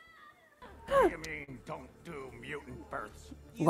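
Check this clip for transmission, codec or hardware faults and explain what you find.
One transmission fault is present: a short concealed packet loss from about 1.43 to 1.49 s. About 40 ms of the stream arrived too late or not at all, so the receiver's decoder synthesised roughly 39 ms of substitute audio, extending the preceding sound's pitch or noise character across the gap before crossfading back into the real signal. It is heard as a brief smeared, wobbling blip where the genuine detail of that instant is lost.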